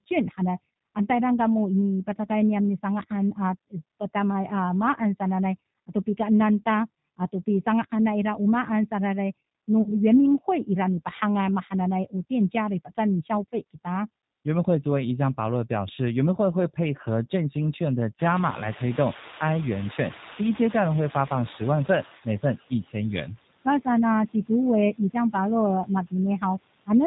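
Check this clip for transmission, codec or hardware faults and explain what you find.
Yes, there are four faults: two run through the whole clip and two appear at specific moments.

Noise suppressor artifacts run throughout. The suppressor lowers bands it judges to be steady noise, cutting the background by about 19 dB. The noise dips between phrases and swells beneath them.

G.729 codec damage is also present throughout and is plainly audible. This 8 kbit/s codec rebuilds speech from a vocal tract model, a pitch predictor and a few pulses per frame. Nothing above 4 kHz survives. The speech is rough, synthetic and band-limited, and the background noise warbles.

VoIP packet loss, concealed by the speech codec, occurs from 9.82 to 9.94 s. About 40 ms of audio went missing, which fits two 20 ms packets. The decoder extrapolated from its last pitch and filter while fading the gain. The result is a brief stretched sound that fades, and the speech stays weak or distorted for a moment after the packets return.

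The noise suppressor catches up from 18.18 to 22.3 s. The room noise jumps by about 23 dB near 18 s. The suppressor's noise estimate lags behind that jump, so at first the noise is cut by only about 11 dB. Over roughly 4.1 s it adapts, and the louder room noise sinks back down.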